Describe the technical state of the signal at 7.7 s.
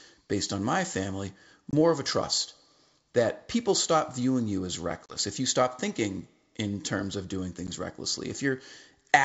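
Packet loss on an ADPCM call occurs from 7.67 to 7.69 s, just after "in terms of doing": about 10 ms of speech, roughly one packet, drops to hard-edged silence. The decoder's predictor and step size then mismatch the sender's, so speech resumes slightly distorted.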